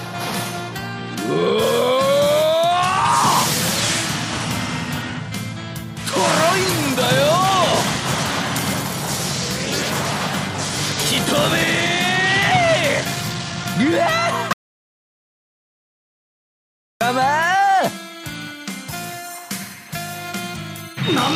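An audio dropout to silence runs from 14.53 to 17.01 s, cutting about 2.48 s to silence with no room tone, likely from a lost input.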